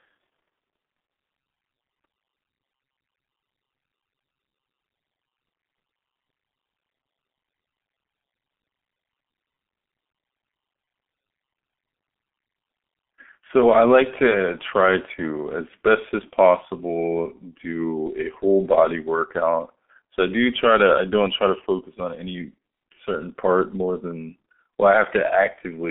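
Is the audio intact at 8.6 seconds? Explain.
No. At 8.6 seconds, as throughout, the G.723.1 codec's coarse 30 ms frames leave muffled, hoarse speech with smeared consonants; a spectrogram shows nothing above about 3.8 kHz.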